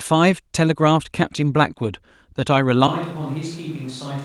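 From 0.31 to 0.33 s, a lost packet rebuilt from error correction: the decoder plays a low-bitrate 20 ms copy, so there is no gap, but the sound turns briefly rougher and noisier, with a smeared, grainier patch on the spectrogram.

At 2.88 s the sound turns suddenly roomy and hollow, with thinner bass and a level drop of about 10 dB. Room noise sits only about 25 dB below the speech and lasts to the end. The likely cause is a switch to a distant microphone. The waveform shrinks abruptly, and the spectrogram shows a raised noise floor and weaker low frequencies.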